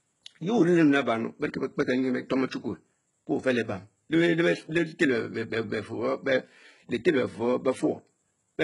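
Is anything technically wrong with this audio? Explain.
Yes. Throughout the speech there is heavy damage that sounds like HE-AAC compression, likely at a very low bitrate in the region of 12 kbps. The codec carries only the lower spectrum properly and fakes the treble by copying lower bands upward under a coarse envelope, so s sounds come out gritty, metallic and lispy. On a spectrogram the upper band shows smeared, repeated patterns with a hard ceiling near 11.1 kHz.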